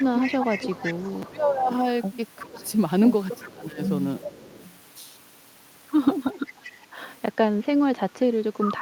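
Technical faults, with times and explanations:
0.0–4.73 s, 6.46–7.16 s and 8.6–8.74 s, echo leak: a copy of the speech returns 370 ms late, about 10 dB below the direct sound, fading to about 20 dB below in the middle stretch, likely an echo canceller letting far-end loudspeaker pickup through.
0.47–4.29 s and 8.08–8.64 s, speech suppressed in double talk: the talker dips by up to about 20 dB for roughly two seconds in all, then about 25 dB for half a second, likely because the canceller attenuated everything while both sides spoke together.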